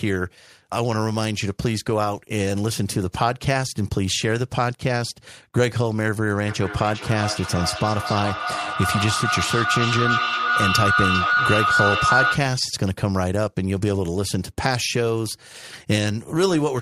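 From 6.47 s to 12.53 s the speech is overtaken by feedback howl. Two devices sharing the call in one room form an acoustic loop, microphone to loudspeaker and back, with gain above unity. Each pass comes back louder and narrower, settling on a tone near 1.5 kHz, with the loop's round-trip delay roughly 400 ms. At its peak the howl sits about 1 dB above the speech, then stops at 12.53 s.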